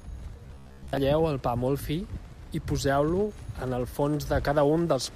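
From 0.46 to 0.97 s the speech turns robotic, just before "el pa molt fi". This is robotic sound from repeated short buffers. New audio likely arrived too slowly, so the player kept looping the last short chunk and skipped the real signal. Most of this span is repeated material. The loop imposes a steady 66.7 Hz buzz, which fits a chunk about 15 ms long. The voice becomes a hard, metallic drone that only loosely tracks the words.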